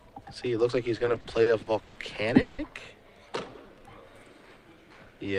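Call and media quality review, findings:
Repeated stalls (stutter), 1.05–1.97 s: seven jitter-buffer underruns, 260 ms filled, longest 110 ms, nothing lost. Spectrogram shows repeated smeared, fading horizontal bands.

Call audio freeze, 2.41–2.60 s: 170 ms of last sound held as fading buzz or hiss, no silence, resumes 170 ms later. Likely packet delay emptying jitter buffer. Spectrogram: frozen spectral slice.

Jitter buffer slow-down, 3.29–3.86 s: pitch periods or pause segments repeated to rebuild reserve, 75 ms added, playback at 88% speed. Waveform: identical cycles repeated in a row.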